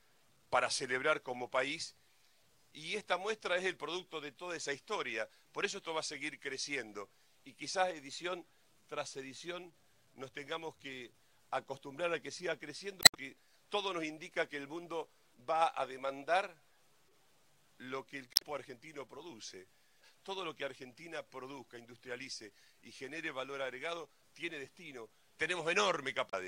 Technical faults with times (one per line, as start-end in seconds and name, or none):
13.00-13.15 damaged data in a compressed stream
18.33-18.42 damaged data in a compressed stream
26.30-26.34 damaged data in a compressed stream